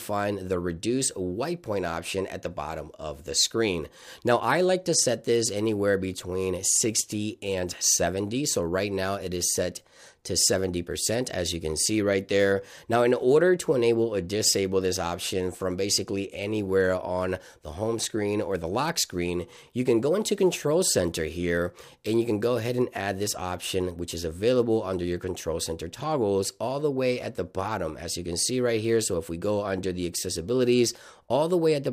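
No technical faults can be heard anywhere in the recording.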